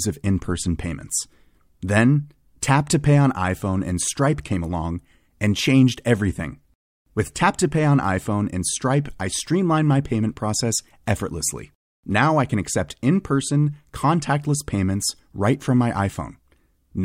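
Pre-echo at about 2.61 s: a sharp speech onset lands late in a transform codec block. The quantisation noise, sized for the loud attack, is spread across the entire block, including the quiet stretch just before it. The result is a short hiss about 16 ms ahead of the attack, roughly 12 dB above the surrounding floor, and a softened, smeared onset. The spread fits a block of around 26 ms, with no switch to shorter blocks for the transient.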